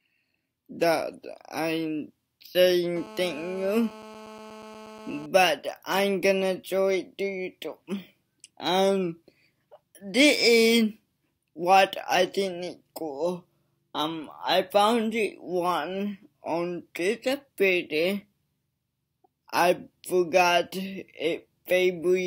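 From 2.96 to 5.26 s, a GSM phone buzz appears. A nearby 2G phone in a call pulses 217 times a second. The audio circuit rectifies those bursts. It gives a steady, raspy 217 Hz buzz with many harmonics, about 19 dB below the signal.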